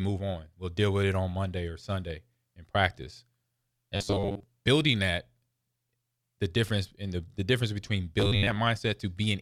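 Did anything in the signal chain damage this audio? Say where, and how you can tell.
Yes, likely driver or buffer underruns: robotic sound from repeated short buffers at 3.96–4.43 s and 8.20–8.59 s, a rigid 100 Hz buzz from a looped 10 ms chunk.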